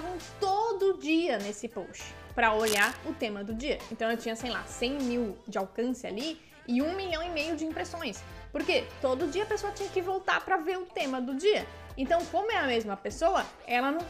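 From 2.64 to 2.97 s a burst of cable scratch noise rasps over the sound, close to its level. It is likely a worn connector or cable being moved, its contact resistance fluctuating. Unlike isolated digital clicks, it is dense, irregular rustling.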